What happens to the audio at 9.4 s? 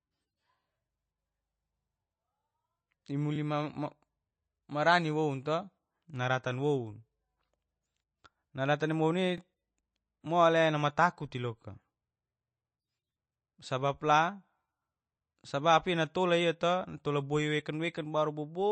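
At 9.38 to 9.40 s there is a stutter from overlapping chunks. A new chunk of audio began before the previous one had finished, so about 21.3 ms of sound plays twice at the join. This fits the sound being handled in blocks of about 6 seconds. It is heard as a brief doubled tick or hiccup. A dropout would leave a gap or a dip at the join, but here nothing is missing; a fragment repeats.

Underneath, and continuing through the moment, there is plainly audible damage, likely from MP3 compression at a low bitrate of around 27 kbps. Nothing is heard above 8.3 kHz, so the top end is dull. Weak frequency components flicker in and out from frame to frame, which gives a watery, swirling texture with chirpy sibilants. A simple low-pass filter would also dull the sound, but it would not swirl like this.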